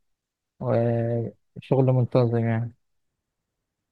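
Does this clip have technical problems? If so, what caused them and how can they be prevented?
No, the speech in this clip has no audible technical faults, so there is nothing here that needs preventing.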